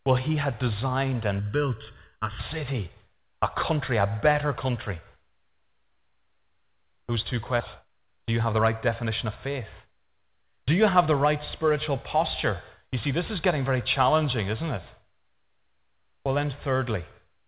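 It's a speech clip carried over what sounds like a narrowband call line, with nothing above 4 kHz, which fits G.711 mu-law at 64 kbps. Right after "he had designed", from 1.39 to 2.39 s, the voice turns hollow and phasey. That's channel delay (comb filtering): one channel is lagging by about 0.7 ms, and when the two get folded to mono, the shared content cancels at regularly spaced frequencies starting around 700 Hz, carving fixed notches that thin out the tone. Then from 7.81 to 11.07 s, leading into "the right spiritual posture", things rush along at about 118% speed with the pitch unchanged. That's a jitter buffer speed-up. The buffer had piled up more audio than it wanted, so the receiver kept snipping out tiny pitch-period-sized slices to catch up, roughly seven tenths of a second in total, and the talker comes across noticeably hurried.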